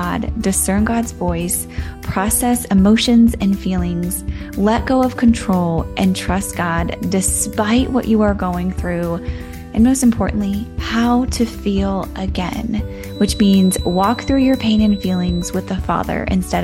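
From 13.04 to 15.58 s a thin, steady feedback whistle at 4 kHz sits about 20 dB below the sound, swelling and fading slowly in level. This is likely a loudspeaker-to-microphone loop held just short of runaway. A spectrogram shows a narrow horizontal line at 4 kHz.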